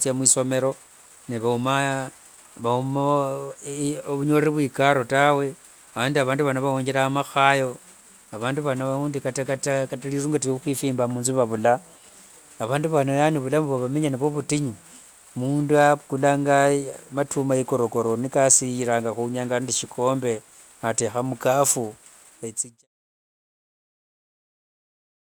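No technical faults are audible.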